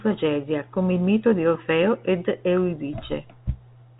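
Nothing's actually wrong here: it's speech carried over ordinary G.711 telephone coding, so the top end stops around 3.8 kHz the way a landline call does, and that narrow band is simply how the format sounds rather than a problem.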